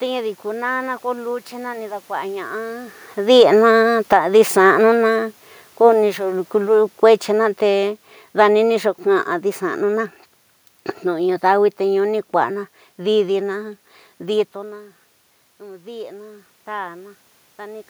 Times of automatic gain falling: 3.21-10.06

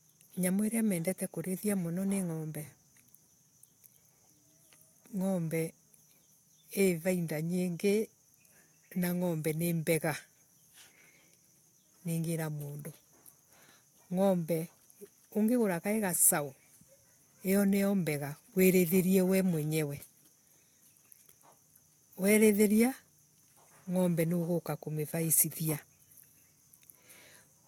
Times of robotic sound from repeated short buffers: none

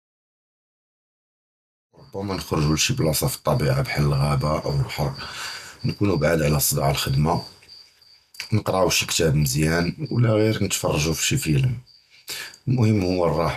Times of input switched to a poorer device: none

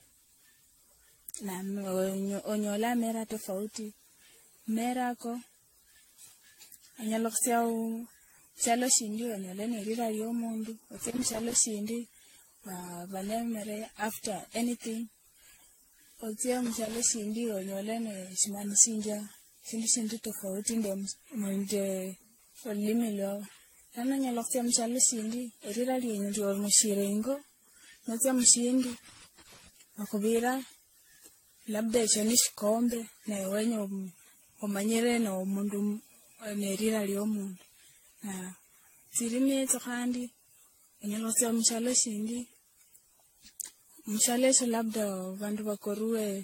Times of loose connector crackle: 10.97-11.57, 16.66-16.98, 28.84-29.68

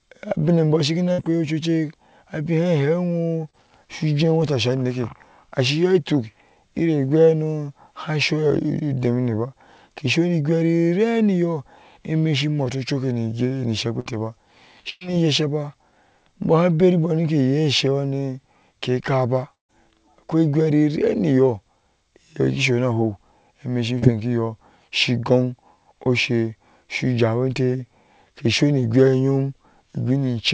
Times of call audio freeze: none

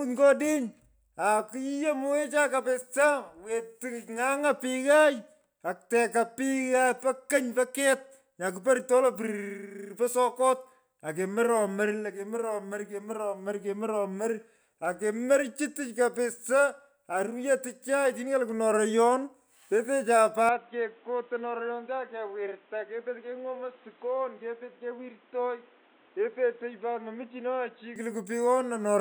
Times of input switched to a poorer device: 20.49-27.96

